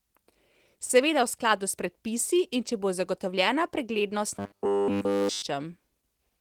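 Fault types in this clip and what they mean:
Robotic sound from repeated short buffers: a rigid metallic buzz near 100 Hz from 4.39 to 5.42 s, likely a 10 ms chunk looped the whole time.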